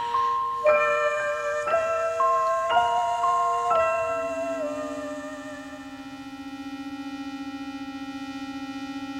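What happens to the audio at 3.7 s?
Nothing goes wrong at 3.7 s; the audio is intact there, with no fault audible at that moment.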